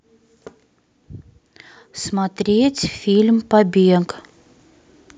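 From 2.11 s to 4.19 s the level climbs steadily by about 8 dB: automatic gain rising. The gain control judged the input too quiet and kept turning itself up over roughly two seconds. What separates this from a talker simply speaking louder is that the background noise swells in step with the speech. A natural change in vocal effort would lift the voice alone and shift its tone, not raise the room along with it.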